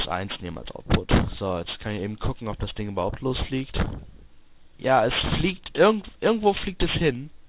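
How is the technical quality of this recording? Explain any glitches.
The technical quality is compromised by aliasing that runs through the whole recording. The sample rate was cut without an anti-alias filter, which fits a drop to 8 kHz, so content above 4 kHz folds back as unrelated tones, roughly 15 dB below the signal, leaving high frequencies gritty and metallic.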